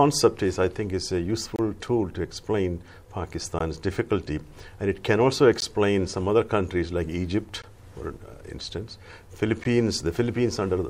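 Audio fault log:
1.56 to 9.64 s: gap at a join of encoded pieces, at 1.56 s (27.5 ms), then 3.59, 5.60, 7.62 and 9.64 s (16 ms each), every 2 s. Untrimmed encoder delay and end padding leave brief, smeared silences before the sound resumes mid-flow.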